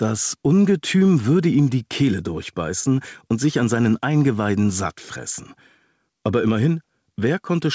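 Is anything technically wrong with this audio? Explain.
Yes. Throughout the clip the level breathes, with a swing of around 5 dB, and loud and soft passages sit squashed close together. This is gain pumping, likely caused by input gain set far too high for the microphone, so a fast limiter or compressor keeps clamping down on every loud moment and releasing in the pauses. The top end stops at 8 kHz, which is expected of the G.722 call path.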